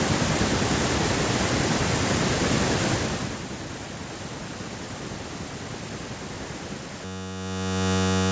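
At 7.05 s a system hang loop begins and runs to the end at 8.32 s. The driver stalled while the hardware replayed one 10.67 ms slice, which fits a 512-sample buffer, producing a steady 93.8 Hz buzz. The waveform shows identical repeating cycles, and the spectrogram shows evenly spaced harmonic lines.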